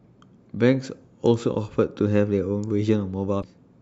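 A broken MP3 bit reservoir disrupts this speech clip from 3.41 to 3.44 s: the audio skips ahead with a garbled glitch lasting about one 26.1 ms frame, likely because missing frames left the next frame reading another frame's data.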